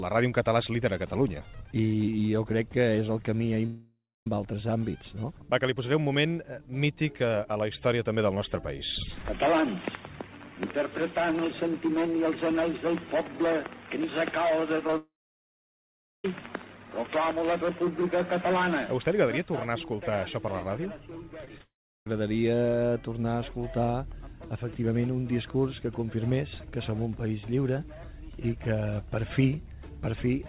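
The audio has three long gaps, at 3.66 to 4.27 s, 14.97 to 16.25 s, and 21.62 to 22.07 s. Each likely comes from a long network dropout. About 0.6 s, 1.27 s and 0.45 s of audio never arrive. A fading buzz or hiss continues the last sound, then silence holds before the audio resumes past the lost part. Brief smears and wobbles also occur at 14.87, 14.91, 21.45, 21.49 and 21.58 s. These are short concealed packet loss. Each hole is about 10 ms, filled by extending the preceding sound. Throughout, nothing sounds above 4 kHz, which points to a G.711 A-law call path.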